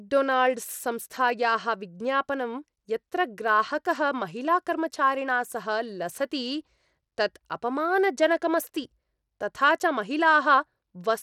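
Throughout, likely Bluetooth SBC compression at a bitrate fitting 96 kbps starves the top bands: nothing above 17.3 kHz, and plainly audible grit.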